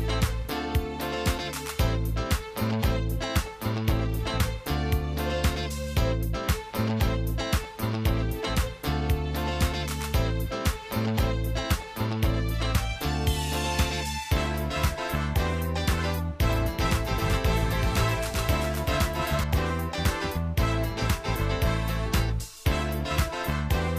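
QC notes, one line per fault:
16.50–19.44 s, doubled audio track: a second full-band copy trails the original by roughly 400 ms at around 5 dB quieter, dry and uncoloured, cutting in and out abruptly. Most likely a slower second capture path or two misaligned copies in an edit.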